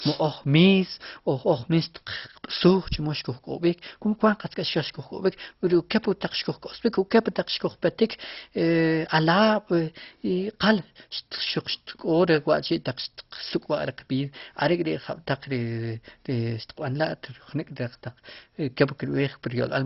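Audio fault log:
Throughout, MP2 compression: the speech is dull, with nothing above 5.6 kHz, and carries a gurgling, granular roughness. This likely comes from MPEG Layer II coding starved of bits, consistent with about 32 kbps, switching off upper sub-bands and coarsely quantising the rest.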